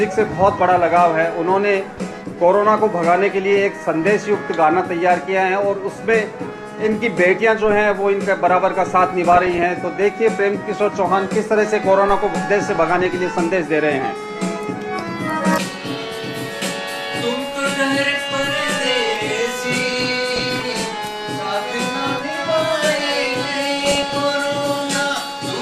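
Short bursts of noise break through the sound four times: from 9.32 to 9.63 s, from 12.69 to 13.10 s, from 19.93 to 20.89 s (the longest burst), and from 23.80 to 24.21 s. This is DAB burbling. Weak reception let a bit error rate of about 0.4 to 0.7 percent slip past error correction into the MP2 stream. The corrupted samples put short blips of noise into single sub-bands, and corrupted scale factors make sub-bands jump in level for up to a frame.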